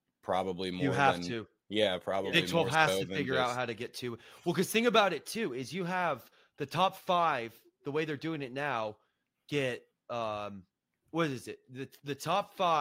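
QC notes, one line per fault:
No faults found in this speech clip; nothing to log.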